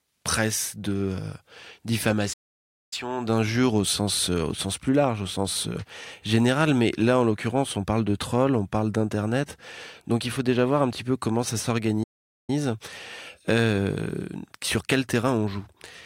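Playback stalls at 2.33 s and 12.03 s: the speech drops to silence for about 0.59 s before "d'injure au sens euh", then for 0.45 s after "petit peu comment ça", likely because the player ran short of data or was blocked.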